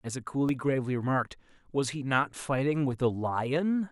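At 0.49 s and 2.42 s the speech drops into a block of digital silence, 1.2 ms and 2.2 ms of silence where output was likely not filled in time. Each sounds like a tick or dip, seen as a flat-line notch in the waveform and a thin broadband vertical streak on a spectrogram.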